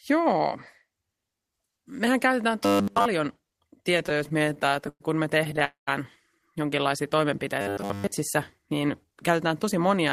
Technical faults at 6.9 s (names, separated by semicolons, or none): none